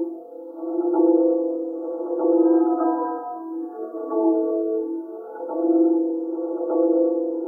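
No technical faults can be heard anywhere in the audio, which carries through without any disturbance to the signal.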